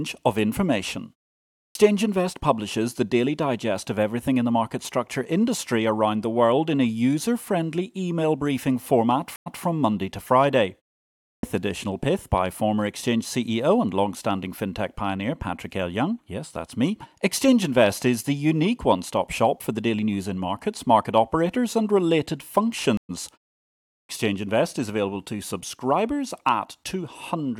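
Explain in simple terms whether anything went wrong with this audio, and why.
Two kinds of fault can be heard.

The first is a clipped start after a pause. The playback device dozes off in short silences. When speech returns, it needs time to wake. So the first sounds go missing. This happens at 1.6 s, at 11.27 s just before "additional pith by former", and at 23.95 s. Each time, about 140 to 160 ms is cut off after a pause of 0.5 to 0.7 s.

The second is a stream reconnect. The connection dropped, the player went quiet, then reconnected and picked up again. At 9.36 s, right after "friendly email briefing format", there is 99 ms of silence. Then the audio restarts 163 ms too early, so a sliver repeats. At 22.97 s, after "market operators and related", 116 ms of silence follows. Then it jumps ahead by roughly a tenth of a second, so a little is skipped.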